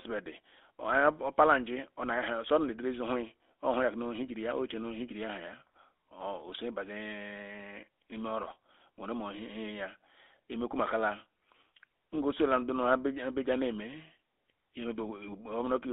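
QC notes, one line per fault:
Throughout, GSM full-rate codec: the speech passes only about 250 Hz to 3.6 kHz, and the coder rebuilds it from a vocal-tract model fed by sparse, regularly spaced pulses, which fits the 13 kbps full-rate scheme and leaves a plainly audible buzzy, gravelly roughness.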